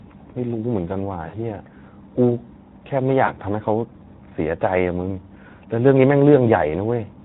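Throughout, the speech carries Speex codec damage, a hoarse, noisy graininess that fits a low bitrate near 11 kbps, unlike the smeared, warbling artefacts of transform codecs. From 1.27 to 1.35 s, and again from 3.25 to 3.33 s, VoIP packet loss concealed by the speech codec replaces 60 ms and then 20 ms of lost audio with a stretched continuation, buzzy or noise-like, that fades rather than falling silent, and the voice stays briefly weak after each gap.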